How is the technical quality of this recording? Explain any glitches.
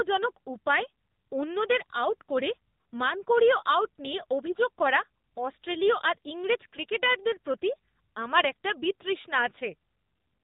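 The recording is noticeably degraded from start to finish by an AMR narrowband mobile codec. The speech sounds muffled, buzzy and somewhat synthetic, with nothing above 4 kHz. The codec rebuilds the voice from a vocal-tract model and a few pulses per 5 ms subframe, and the plainly audible damage points to one of the lower AMR-NB modes, near 8 kbps.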